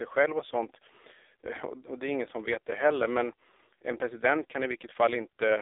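From start to finish the speech carries AMR narrowband mobile codec coding, confined to a line band of roughly 300 Hz to 3.7 kHz, so it sounds thin and phone-like with no upper air. The damage is heavy. The codec rebuilds each 20 ms frame from a vocal-tract model and a sparse pulse excitation, and at this starvation level, which fits a low AMR-NB mode near 5.9 kbps, the speech comes out buzzy, rasping and noticeably synthetic.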